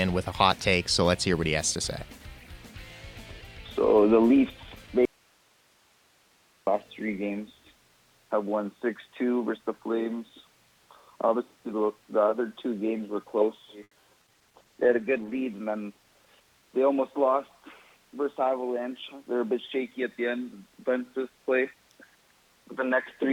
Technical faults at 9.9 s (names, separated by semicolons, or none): none